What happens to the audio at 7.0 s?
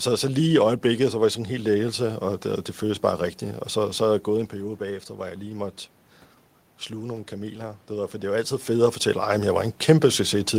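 Automatic gain rising runs from 6.91 to 8.66 s. After the input level fell by about 10 dB, the gain control judged the signal too quiet and lifted its gain by about 3 dB, so speech and room noise swell together over that span.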